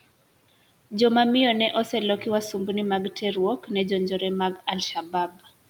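The noise suppressor mistook parts of the speech for background: from 3.59 to 3.7 s it pulled the level down by about 12 dB, and from 4.95 to 5.51 s by about 16 dB. That speech cut by the noise suppressor leaves those stretches swallowed and faint, sinking toward the room noise.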